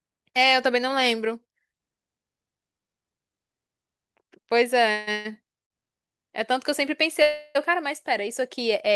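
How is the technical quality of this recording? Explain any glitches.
The recording is marred by three call audio freezes and one short stall from a late packet, all in the second half of the speech.

The freezes come at 4.91 to 5.09 s, 5.12 to 5.33 s and 7.22 to 7.57 s. At each, the speech halts and the last sound is drawn out as a fading buzzy hum that never drops to full silence. The hum fills about 156 ms, 128 ms and 328 ms respectively. The speech then resumes exactly where it stopped, so nothing is lost, only delayed. This likely reflects packets held up in transit, leaving the receiver's jitter buffer empty while it improvised to cover the wait.

The short stall from a late packet sits at 5.64 to 5.72 s. It's subtler, a sound held unnaturally long with a faint buzzy smear for about 60 ms before the speech carries on intact. One packet missed its playout moment, the jitter buffer briefly ran dry, and the receiver stretched the previous audio until the packet turned up.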